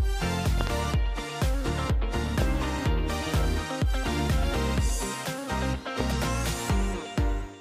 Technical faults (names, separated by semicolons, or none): loud pop